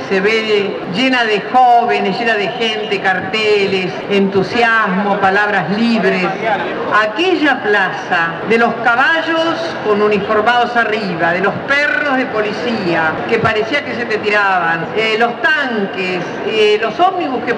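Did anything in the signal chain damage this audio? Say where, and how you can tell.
No, nothing along the chain audibly damaged this audio, and I hear no stage leaving a mark on it.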